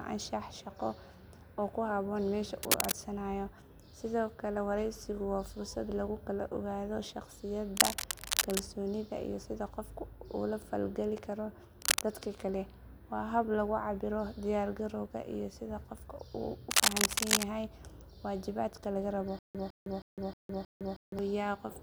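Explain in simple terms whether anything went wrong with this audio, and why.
Yes, two things. There's cable scratch noise at 2.58–2.92, 7.77–8.60, 11.82–12.01 and 16.71–17.44 s: scratchy rustling, louder than the speech, likely from a worn cable or connector being jiggled.

Then, from 19.39 to 21.19 s, there's stutter with silent gaps. A 156 ms snippet repeats five times, each followed by about 159 ms of dead silence, because playback likely stalled and kept retrying.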